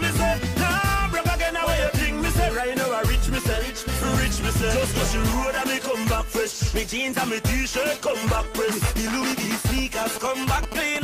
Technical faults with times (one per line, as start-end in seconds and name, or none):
8.85-10.97 GSM signalling bursts